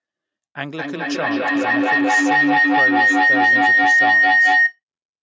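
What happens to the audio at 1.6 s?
Feedback howl runs from 0.78 s to 4.8 s, covering 1.6 s. Two devices in the same room share a call, and each trip through microphone and loudspeaker adds gain, so repeats grow into a tone around 2 kHz, with the loop repeating roughly every 200 ms and peaking about 14 dB above the speech.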